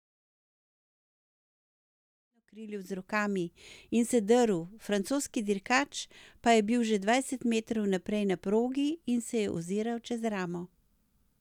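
Nothing stood out on listening to this speech recording, where the level rises in a smooth fade-in from around 2.5 s and reaches full level at 3.37 s, just as an editor would shape it.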